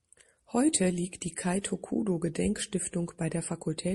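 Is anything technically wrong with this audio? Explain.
Yes, two things. Throughout, the sound is plainly watery and swirly, with a metallic edge on s sounds. That's likely MP3 compression at a low bitrate, around 48 kbps: short on bits, the encoder switches weak frequency lines on and off between frames.

There's also pre-echo from 1.62 to 1.64 s. A sharp attack sits late in a block of about 48 ms, so the codec's quantisation noise spreads about 24 ms ahead of it, rising about 12 dB. You hear a brief hiss just before the attack, which then sounds smeared, suggesting the encoder never switched to short blocks.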